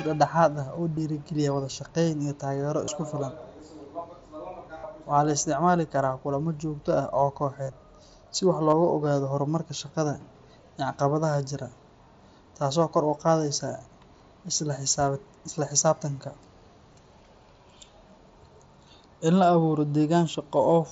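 Speech over a Bluetooth headset shows concealed Bluetooth headset packet loss at 0.96 s, before "wada shaqeyn iyo taageero", and at 2.85–2.88, 4.78–4.84, 7.64–7.72 and 8.70–8.73 s. Lost packets are filled by repeating recent waveform, so the longer gaps turn briefly buzzy.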